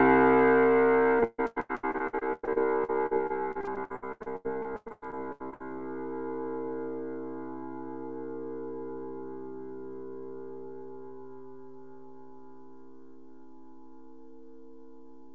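A recording of everyday sound, heard through a call path with nothing above 8 kHz, which fits G.722 at 64 kbps. From 1.20 to 5.62 s there is repeated packet loss, giving a robotic sound. Thirty-three short holes appear, the longest 144 ms. Each is patched by stretching the previous sound, so 37% of that stretch is filler. The result is choppy, with pieces missing.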